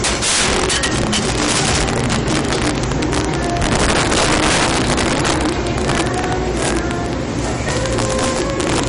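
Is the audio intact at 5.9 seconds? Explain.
No. At 5.9 seconds, as throughout the clip, the audio carries integer overflow: loud peaks, driven about 14 dB past the limit, wrap to the opposite sign instead of being held, affecting roughly 3 percent of samples. These are violent cracks, far sharper than the flattened, buzzy tops of ordinary clipping.

The same moment also sounds watery and swirly, with smeared attacks and nothing above 10.6 kHz. The likely cause is MP3 compression at a low bitrate, around 40 kbps, which drops weak frequency lines frame by frame. That flickering texture separates it from a plain low-pass filter, which dulls the treble without the swirl.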